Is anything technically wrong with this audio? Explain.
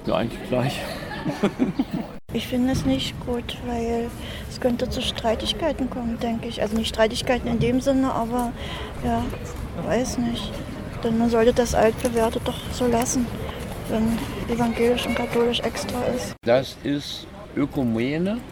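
Yes. There is a DC step at 2.15 s. The zero line of the waveform jumps suddenly by about -32 dBFS, as if an input carrying an offset had been switched in or a converter had recalibrated. The offset doesn't hold. It dies away slowly, like the response of a 2 Hz high-pass filter. That abrupt shift is heard as a single low thump. The sound itself carries on across the step without change.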